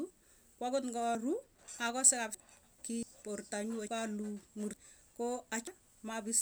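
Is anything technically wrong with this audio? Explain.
Yes. Compressed frames are skipped at 1.15, 2.35, 3.03, 3.88, 4.74 and 5.67 s. Whole coded frames, consistent with an 85.3 ms frame length, never play, so the speech jumps ahead by roughly 0.3 s to a second. On a spectrogram these appear as abrupt breaks.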